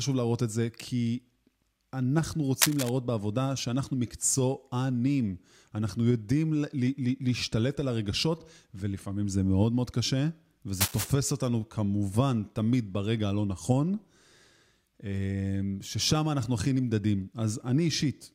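At 2.61 to 2.89 s, and again at 10.80 to 11.11 s, a burst of cable scratch noise rasps over the speech, the first about as loud as the voice, the second a little quieter. It is likely a worn lead or connector being moved, its contact resistance jumping erratically. On a waveform each burst shows as dense, jagged spikes, and a spectrogram shows broadband, uneven vertical streaks lasting about 0.3 s.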